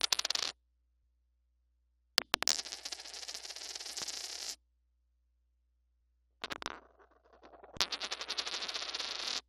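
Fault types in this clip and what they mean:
Loud pop: Single sharp pops at about 2.22, 4.02 and 6.52 s, each roughly 20 ms, peaking about 15 to 20 dB above the surrounding sound. They are likely voltage pulses from a switch, static or driver glitch. Unlike a dropout, the sound continues unbroken underneath.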